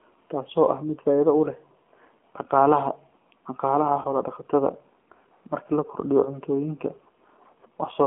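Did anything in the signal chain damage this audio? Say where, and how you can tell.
Yes. Throughout, the speech sounds buzzy and synthetic, confined to roughly 200 Hz to 3.4 kHz with nothing above. That is the AMR narrowband mobile codec at the codec stage, and the coarse pulse modelling suggests a low mode around 7.4 kbps.

At the network stage, just after "dhaqaalaha dhaqaalaha", a brief dip and warble runs from 4.02 to 4.08 s. This is a lost AMR speech frame, consistent with a single 20 ms loss. The decoder repeats the previous pitch and vocal-tract settings at reduced gain until good frames resume.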